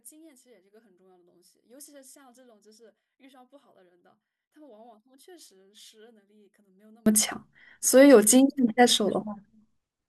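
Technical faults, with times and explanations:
0.0 to 7.06 s, one channel inverted: one stereo channel likely has reversed polarity, so summing to mono cancels the centred content. The speech drops by about 35 dB, leaving only a faint residue of the channel difference until it returns.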